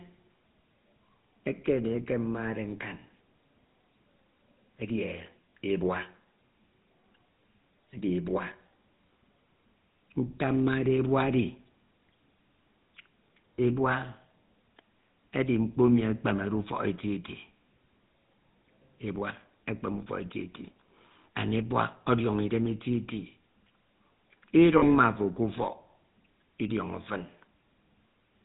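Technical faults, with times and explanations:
Throughout: GSM full-rate codec. The speech has a plainly audible buzzy, gravelly roughness, and nothing above 4 kHz survives, which fits the 13 kbps full-rate coder. It models the vocal tract and drives it with sparse, regular pulses, so fine detail turns into coarse buzz.
5.50 s, 13.57 to 13.60 s and 24.78 to 24.83 s: lost GSM frames. Each gap is patched by repeating the last good frame's settings. This gives a brief rough, metallic ring. The first two gaps fit a single 20 ms frame, and the last fits two frames, about 40 ms.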